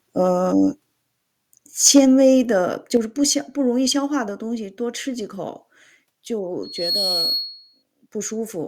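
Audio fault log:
1.85–2.0 s, microphone overload: the loudest stretch of speech takes on a harsh, crackling edge for about 0.15 s, as the waveform's peaks are flattened rather than rounded. The likely cause is an input level set too high, so these peaks ran about 3 dB past what the converter could represent. Around one sample in twenty lands on the ceiling, and each cut-off top adds jagged harmonics that make the edge.
1.98 s and 2.97 s, microphone volume stepped down: the speech and the background beneath it drop together in two sudden steps, about 2 dB at 1.98 s and then about 4 dB at 2.97 s. The first step comes right at the end of the distorted peak, so the likely cause is call software reacting to the overload by cutting the device's input volume. Because the reduction applies to the input as a whole, there is no fade and the room sound drops with the speech.
6.63–7.83 s, loudspeaker feedback squeal: a single tone at 4.3 kHz swells out of the speech over about 0.3 s. 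It then holds about 5 dB above the speech level until it stops at 7.83 s. The microphone is picking up the loudspeaker it feeds, and at that one frequency each trip around the loop returns more than it sent. The tone keeps growing until the amplifier limits it, which is why it sounds like a sustained, piercing whistle.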